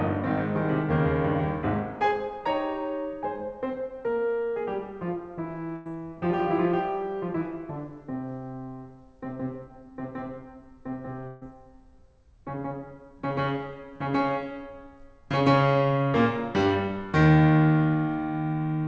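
At 5.76 s and again at 11.27 s the music hits a burst of packet loss. Roughly 100 ms and then 140 ms of audio never arrived, and the receiver held the last sound and let it fade. You hear a short sustained tone or hiss, then the music resumes further on with that stretch skipped. Unlike a plain dropout, the gap is filled rather than silent. The whole clip is also band-limited to 8 kHz by the call codec.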